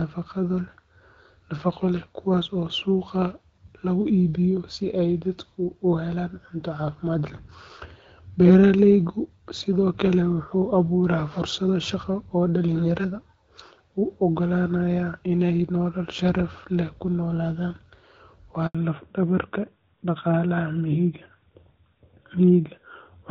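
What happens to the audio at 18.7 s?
At 18.67 s the speech cuts out in a handover gap lasting 80 ms, until 18.75 s. The call is being passed from one network link to another. No speech frames arrive during the switch. The sound fades within a few tens of milliseconds and then there is silence. Anything spoken in that window is simply missing.

From 18.75 s to the end, the call shows a fallback to narrowband. Before the switch it ran on AMR-WB (HD Voice) at 12.65 kbit/s. After the switch it runs on AMR-NB at 12.2 kbit/s. The narrowband codec carries nothing above 4 kHz, so the top of the spectrum disappears. The speech turns duller and rougher. The airy, crisp edge heard earlier in the call is gone.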